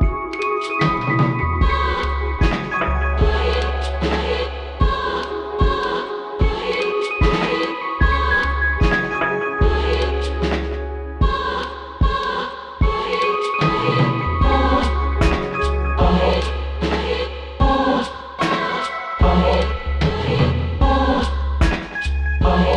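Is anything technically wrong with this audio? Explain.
No, no technical faults heard.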